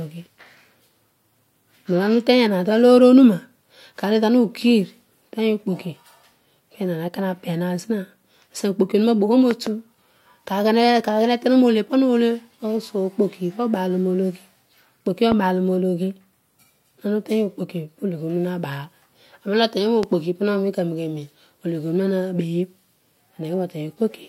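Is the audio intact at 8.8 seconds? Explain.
Yes, at 8.8 seconds the speech is intact, with no dropout, click, distortion or other fault at that moment.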